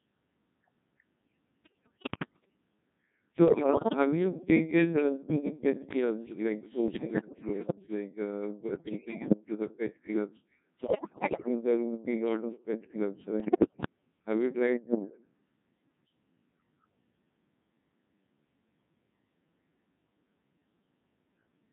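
The whole speech clip runs through a Codec 2 vocoder at 1.6 kbit/s, so it's heavily robotic and buzzy, with the voice rebuilt from pitch and envelope rather than the real waveform. Bit errors on digital voice radio then hit at 1.6–2.6, 3.5–3.9, 6.9–7.8, 8.8–9.4, 10.8–11.5 and 13.4–13.9 s, scrambling pitch, level and tone into warbly gibberish. The worst is between "to the pet clubs" and "there will be a".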